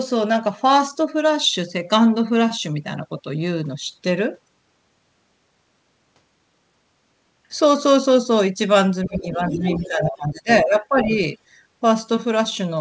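From 9.05 to 11.15 s, the echo canceller likely confused the talker with loudspeaker echo during double talk and turned both down. The speech is suppressed in double talk, dipping by up to about 15 dB and fading in pieces for roughly one and a half seconds.

Within that stretch, from 9.49 to 9.88 s, residual echo likely escaped cancellation, so the other side's voice is leaking through. It is a brief second voice sitting about 10 dB below the speech, heard through the wideband call path, whose 8 kHz ceiling fits G.722.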